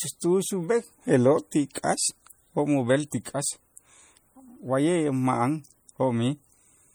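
MP3 compression runs through the whole speech clip, from start to finish. The codec divides the signal into narrow frequency lines and, short of bits, drops the weaker ones, so they flicker on and off between frames. The result is plainly audible: a watery, swirling texture, metallic chirping on s sounds, and softened consonant attacks. The damage fits a low bitrate near 48 kbps, though content still reaches about 21 kHz. Likely MP3 encoding at that rate.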